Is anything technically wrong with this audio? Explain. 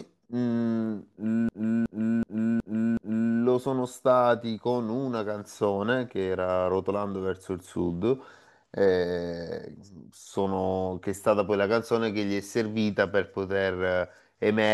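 Yes. From 1.49 to 3.34 s there is a system hang loop. The playback path froze while the sound hardware kept cycling through its ring buffer, so one 0.37 s slice of speech repeats exactly five times at about 2.69 Hz, which fits a 16384-sample buffer. It sounds like a mechanical machine-gun stutter. Unlike a network dropout or jitter stutter, each repeat is sample-identical, with no gaps or variation, and essentially no audio is lost afterwards.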